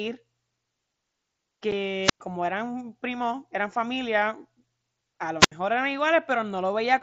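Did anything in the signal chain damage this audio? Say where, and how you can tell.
Yes. At about 1.71 s there is unconcealed Bluetooth headset packet loss on the wireless link between headset and phone. The sound breaks off for about 7.5 ms, a length that fits a single missing packet, and the gap has hard edges that can produce a click. Nothing fills the hole with a smoothed guess; silence or an idle pattern simply takes its place. The mSBC wideband codec carrying this link can be heard running with only light graininess.

Two wireless microphone squelch dropouts come from the analogue radio stage ahead of the receiver output, at 2.02 to 2.20 s and 5.39 to 5.52 s. In each, hiss or static rises briefly, then the output falls to near silence, for about 107 ms in the first and about 72 ms in the second, before the sound returns. The FM signal fades until it falls below the receiver's squelch threshold, and the receiver mutes its output until the signal recovers.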